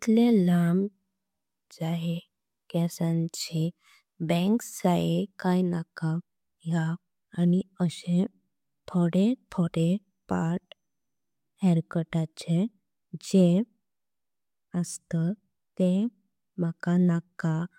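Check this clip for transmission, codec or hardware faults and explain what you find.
Nothing wrong turns up anywhere in this speech recording.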